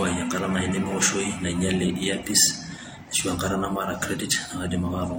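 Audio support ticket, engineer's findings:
Throughout: speech has two codec signatures, swirly smeared highs plus warble, hard ceiling at 16.2 kHz. Likely transcoding between lossy codecs: HE-AAC near 32 kbit/s re-coding MP3 near 64 kbit/s artefacts. Spectrogram: flat cut-off, blotchy patched upper band.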